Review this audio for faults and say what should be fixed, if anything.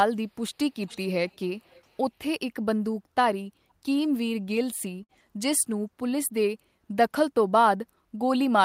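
A faint delayed copy of the speech trails the talker at 0.84 to 0.98 s, 1.29 to 1.37 s and 1.59 to 1.99 s, arriving about 0.45 s late and sitting roughly 20 to 35 dB below the direct sound. It is likely an echo leak, where a far-end loudspeaker's output reached its microphone and the echo canceller let part of it back through. Fixing it means using a headset at that end or retuning its echo canceller to handle a delay of around 450 ms.

At 5.03 to 5.11 s the sound freezes into a held, fading tail for about 50 ms, then jumps ahead with about 60 ms missing. This is a burst of packet loss: the receiver stretched the last audio it had while packets failed to arrive, then skipped the lost stretch. Stronger forward error correction or a deeper jitter buffer would prevent it.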